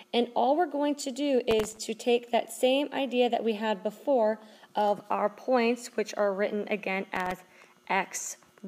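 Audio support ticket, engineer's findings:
Processor overload crackle at 1.51–1.77 s and 7.16–7.40 s. Gritty tearing bursts, each a rapid run of a dozen-plus tiny hard-edged repeats of old audio, which fits very short buffers missed back to back. Clears once load passes. Unlike clipping, it is independent of signal level.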